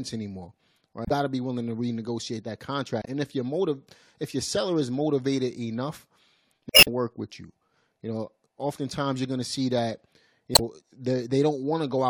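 Damaged data in the compressed stream makes the decoder misread frames and lose sync while it hunts for the next valid frame header. In this speech clip that happens four times, each heard as a brief chirp, squawk, click or short hole breaking through the speech: at 1.03 to 1.11 s, 3.00 to 3.08 s, 6.69 to 6.88 s, and 10.52 to 10.60 s. The third burst, at about 190 ms, is more than twice as long as the others, which last about 80 ms each.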